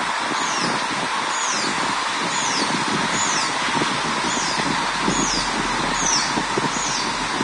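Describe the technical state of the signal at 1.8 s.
At 1.8 s, as throughout, heavy Vorbis compression is likely: nothing above 10.6 kHz, and the coarsely quantised treble turns to grainy hiss rather than the dull, clean loss of a simple low-pass.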